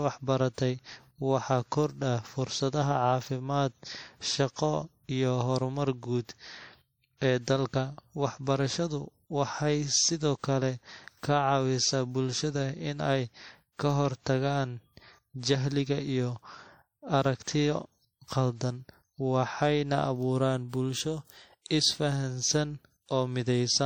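From start to finish the speech has layered codec artefacts and nothing above 19.3 kHz. That's likely transcoding between lossy codecs: it points to a low-rate MP3 pass re-encoded to WMA, whose bits go on the first codec's damage while it adds its own.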